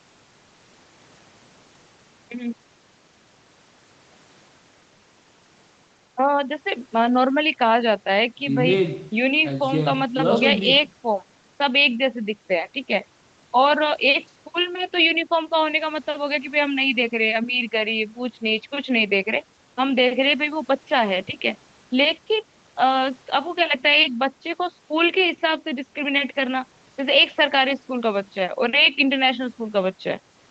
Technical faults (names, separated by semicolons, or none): none